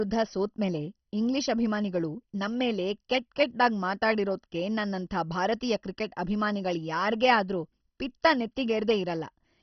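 Dull, gurgling speech with granular distortion and nothing above 6.1 kHz throughout, likely MP2 compression at a very low bitrate, near 32 kbps, starving the upper sub-bands.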